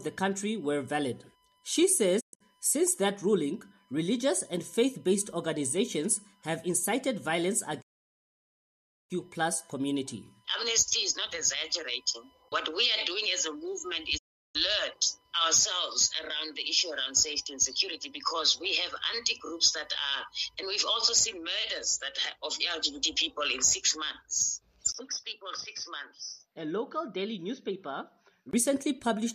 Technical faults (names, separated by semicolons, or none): USB whine; digital broadcast dropout; input switched to a poorer device